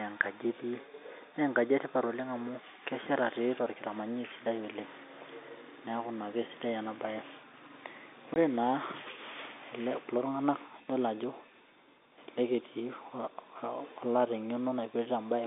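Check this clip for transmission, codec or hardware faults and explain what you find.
One transmission fault is audible: a single dropout where packet loss was filled with silence. From 8.34 to 8.36 s the speech stops dead for about 20 ms, which fits two consecutive 10 ms packets failing to arrive. The receiver played digital silence in their place and made no attempt at concealment, so the waveform is cut abruptly on both sides. The narrow telephone band of the G.711 line, roughly 250 Hz to 3.6 kHz, can be heard throughout.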